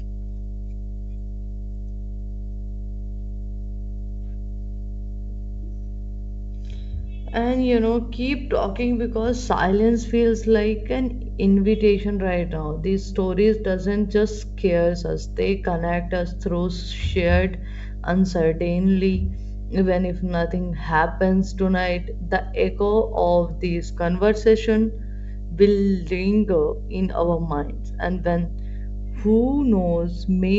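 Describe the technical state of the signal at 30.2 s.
At 30.2 s the speech carries mains hum, a steady 50 Hz tone with low harmonics sitting only about 10 dB below the signal. A ground loop or nearby transformer is coupling the power line into the audio, and it persists through the whole clip.

Just before that moment, from 30.14 to 30.17 s, there are bit errors on an ADPCM link. Flipped bits corrupt the decoder's step size and predictor, so each error rings on briefly, producing a short pop and rough burst with a momentary level change over the G.722 wideband audio.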